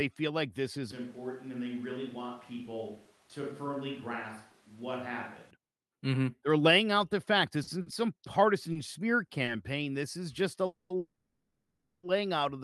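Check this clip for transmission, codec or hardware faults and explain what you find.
Three kinds of fault are audible, all carried over a call path whose Opus coding trims the top end at around 12 kHz.

Switch to a distant microphone, from 0.92 s to 5.51 s, just after "feel like this is". The sound turns abruptly roomy and hollow, thinner in the bass, about 5 dB quieter, with background noise only around 25 dB below the speech. The likely cause is the close microphone dropping out in favour of one further away. It is distinguishable from a simple level dip because tone, room and noise all change together, and the return is equally sudden.

Repeated stalls (stutter), from 7.63 s to 9.57 s. Five brief holds, the longest about 50 ms and 170 ms in total, interrupt the flow as the jitter buffer repeatedly runs dry and the receiver stretches the last sound. Nothing is lost; the audio drags and hiccups.

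Call audio freeze, from 10.66 s to 10.92 s and again from 10.98 s to 12.05 s, between "is just a" and "out of the". Delayed packets likely emptied the buffer, so the last sound is held as a fading buzz or hiss, the longer one sinking to silence for 0.14 s. Playback then resumes exactly where it stopped, adding delay rather than skipping audio, which sets it apart from a dropout.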